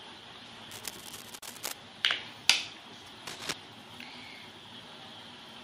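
The audio carries two faults. From 0.70 to 1.72 s, and again from 3.27 to 3.53 s, dense, uneven scratching rides over the sound. This is cable scratch noise, sitting a little below the signal in the first burst and about level with it in the second, likely from a worn cable, connector or control whose contact resistance fluctuated as it moved. Inside the first burst, at 1.39 s, the sound drops out for about 36 ms with softened edges and then resumes where it left off. That is a gap at a join of encoded pieces: separately encoded segments were butted together without removing the encoder's leading delay and final-frame padding.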